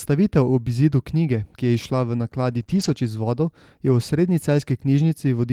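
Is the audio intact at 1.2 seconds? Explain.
Yes, the speech at 1.2 seconds plays through cleanly with no audible fault at that moment.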